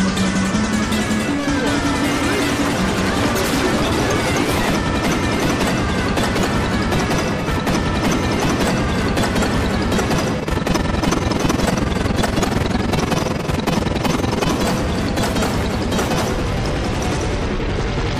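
From 10.4 to 14.52 s there's overlap-add ripple: the frames were windowed and summed back with an overlap that doesn't add up to a flat gain, so the level dips about 11 dB once per frame, around 20 times a second, giving a rough, fast flutter.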